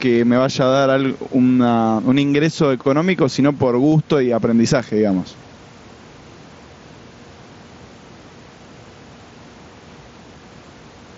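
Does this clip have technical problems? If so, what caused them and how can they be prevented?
Yes. Gain pumping runs through the whole clip: the gain swings by around 10 dB as it is pulled down on every loud syllable, leaving speech squashed. The likely cause is input gain set far too high, with a fast limiter repeatedly clamping it. This is separate from the steady room noise, which sits about 34 dB below the speech. Lowering the microphone gain so the limiter rarely engages prevents it.

Concealed Bluetooth headset packet loss occurs once, at 3.92 s. About 7.5 ms of audio went missing, which fits a single lost mSBC frame, and the receiver filled it by repeating a matching stretch of the preceding waveform. Unlike a dropout, there is no silent gap, and the single loss is nearly hidden. Keeping the headset close to the phone and away from radio interference prevents it.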